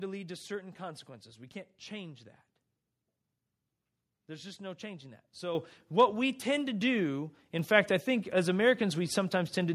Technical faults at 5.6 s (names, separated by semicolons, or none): microphone volume stepped up